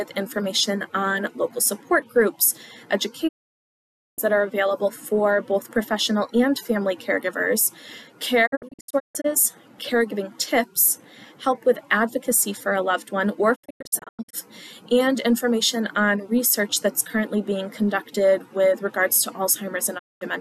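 Digital broadcast dropout mutes the audio with a quick fade at 3.27–4.20 s and 19.97–20.23 s, and as scattered short holes at 8.45–9.26 s and 13.54–14.35 s. This is the receiver muting on failed frames, with nothing concealed or repeated.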